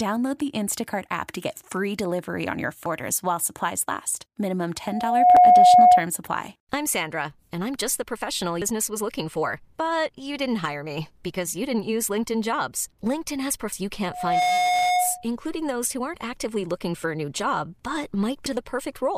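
Damaged data in a compressed stream first appears at 2.86 s as a brief blip: corrupted bytes leave the decoder unable to read a frame, so it loses sync and hunts for the next frame header. The same glitch recurs at 5.37 s, at 8.62 s between "I'm just the professional" and "was looking for", at 13.73 s, and at 18.46 s.

Loudspeaker feedback squeal runs from 4.85 to 6.06 s, ending just before "supply I'm". A microphone is picking up the loudspeaker it feeds, and the loop's gain exceeds one at 723 Hz. That tone swells over about half a second to roughly 15 dB above the speech. It returns at the same 723 Hz from 14.08 to 15.27 s, before "those who aren't". This time it builds in about 0.3 s and stays milder, roughly 5 dB above the speech. The 5.37 s blip falls inside the first squeal.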